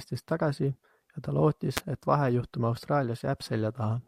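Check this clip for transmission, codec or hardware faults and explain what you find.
A nearby switch or discharge likely arced into the audio line, causing an electrical switching spike at 1.77 s: a sharp snap, peaking around -5 dBFS, on top of the speech.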